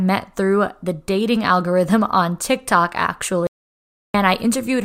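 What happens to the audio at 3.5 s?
At 3.47 s the speech cuts out abruptly into an audio dropout to silence that lasts until 4.14 s, so about 0.67 s of speech is simply gone before it resumes mid-flow. The gap holds silence with no room tone, the likely result of the input being lost while the recorder kept writing silence. On a waveform this is a flat line; on a spectrogram, a blank vertical band across all frequencies.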